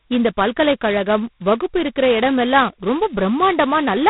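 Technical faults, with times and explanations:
Throughout, G.726 ADPCM: the speech carries a harsh, rasping hiss that rises and falls with its level, and nothing passes above about 3.9 kHz. The codec sends only a few bits per sample describing the error of an adaptive prediction, so the coarse quantisation noise tracks the signal rather than sitting at a fixed floor. The heavy damage points to the lowest-rate mode, which fits 16 kbit/s coding, two bits per sample.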